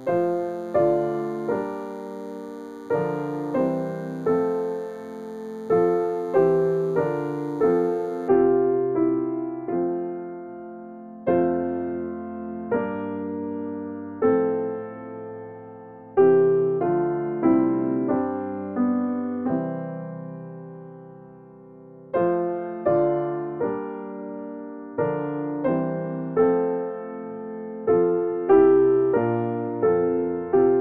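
A thin, steady 100 Hz buzz rich in harmonics runs faintly beneath the sound from 0 to 8.29 s: DECT cordless phone buzz, its 10 ms radio bursts rectified by nearby audio circuitry.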